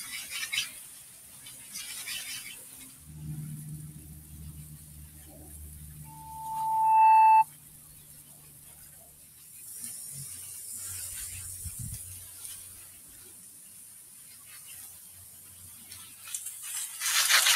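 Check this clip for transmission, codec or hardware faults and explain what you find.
A speech-oriented noise suppressor is the fault here, running on non-speech material for the whole clip.

Noise suppressor applied to music or sounds, throughout: the processor treats steady tones, ambience and decays as noise and pulls them down, so level swings by around 10 dB. Transients pass while sustained parts sink, which separates this from an AGC, whose gain moves the whole signal together.

Sound cut by the noise suppressor, at 0.94–1.46 s, 2.9–3.05 s, 7.93–8.61 s, 9.06–9.41 s, 12.88–14.52 s and 14.97–15.91 s: held or fading sound drops by about 4 to 5 dB and tails end early. Onsets stay intact, so these are not dropouts, which would silence everything.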